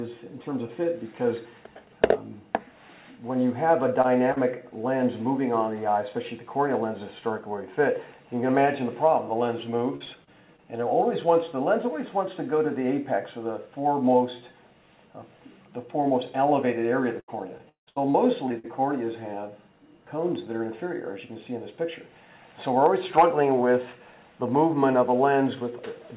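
At 4.02 to 4.06 s and 4.32 to 4.38 s, short concealed packet loss occurs. Gaps of 20 and 40 ms were filled by extending the preceding sound, leaving brief smears.

From 9.96 to 10.6 s, repeated packet loss gives choppy, robotic sound. Four gaps were patched in quick succession. It returns from 17.2 to 18.69 s with nine gaps, the longest 176 ms.

Throughout, nothing reaches above 4 kHz, which points to a narrowband call codec such as G.711 mu-law.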